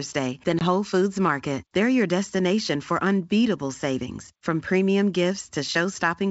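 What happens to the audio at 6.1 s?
Nothing goes wrong at 6.1 s: the speech carries on intact through that moment, with no fault to be heard there.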